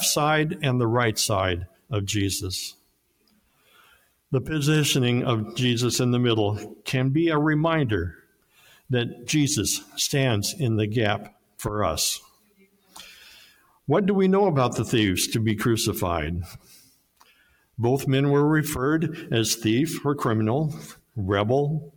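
A noise suppressor tuned for speech is applied to this sound throughout, treating sustained tones and tails as noise and swinging their level by about 20 dB. Onsets survive, which separates it from a gate or dropout. The sound is cut by the noise suppressor at 1.66–1.92, 2.72–4.32, 8.12–8.90, 9.81–9.97 (about 10 dB), 11.25–11.61, 12.20–13.88, 16.51–17.78 and 20.91–21.17 s, sinking about 20 dB rather than vanishing.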